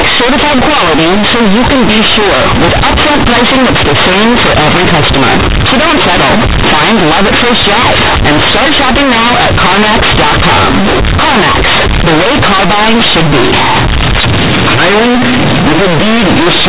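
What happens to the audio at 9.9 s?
At 9.9 s, as across the whole clip, A-law companded audio is read as linear 8-bit, giving loud buzzy distortion; the waveform looks bent out of shape, with broadband noise filling pauses.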